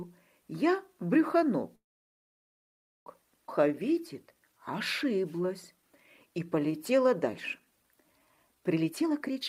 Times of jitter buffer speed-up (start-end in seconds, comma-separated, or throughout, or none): 8.74-9.41